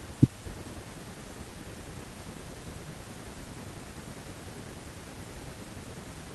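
Speech recording, with no technical faults audible anywhere.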